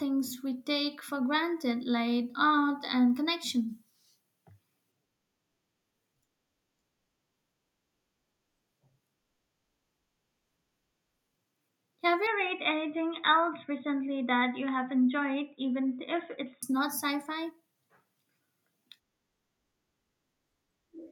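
At 12.27 s the speech suddenly goes dull and boxy, with nothing above about 3.8 kHz, and a faint new background comes in well below the voice. The level stays about the same and there's no gap at the change. At 16.63 s the full brightness snaps back. That pattern is likely an input switched to a poorer device, such as another mic or a headset's call profile, whose narrower band and own noise floor took over for those 4.4 seconds.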